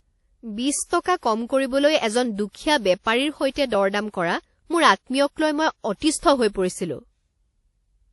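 Throughout the speech, nothing is heard above 11.5 kHz. Two layers of compression artefacts overlap. This is likely transcoding between lossy codecs, which fits MP3 at 48 kbit/s re-encoded as WMA at 64 kbit/s. The second encoder spends bits on the first's smearing and adds its own.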